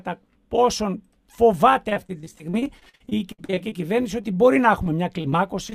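Repeated packet loss (robotic sound) runs from 1.89 to 4.38 s. Some two dozen gaps arrive in quick succession, the longest about 60 ms, and together they remove roughly 460 ms of the real signal. Each hole is covered by stretching the last received sound forward. Because one patch barely ends before the next begins, about a quarter of this span is synthetic fill. The sound turns choppy and machine-like, with fragments missing. After that, short concealed packet loss recurs at 4.84 to 4.87 s, 5.21 to 5.26 s, 5.30 to 5.34 s and 5.70 to 5.74 s. Each time about 20 ms of audio failed to reach the decoder in time. The receiver extrapolated from what came just before, continuing a pitch or shaping noise to match over 15 to 25 ms, and then crossfaded back into the true signal. Each dropout is heard as a brief smear or wobble.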